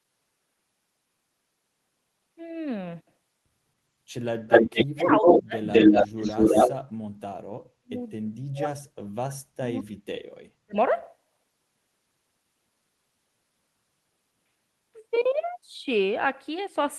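From 4.47 to 5.42 s, and again from 5.64 to 6.75 s, an echo leak is audible. A delayed copy of the far talker trails the original by 215 ms, which points to a loudspeaker echo the canceller likely failed to remove. It is fainter in the first stretch and stronger in the second. Unlike reverberation, it is a distinct repeat rather than a smooth decay.

Overlapping the first echo, from 4.71 to 5.57 s, and then at 7.23–7.96, 8.12–8.90, 9.24–10.09 and 10.37–10.76 s, the near talker is clipped by speech suppression in double talk. The level drops by roughly 35 to 40 dB in bursts of about 0.4 to 0.7 s, likely because the canceller mistook that speech for echo. These are gated holes rather than a repeated copy.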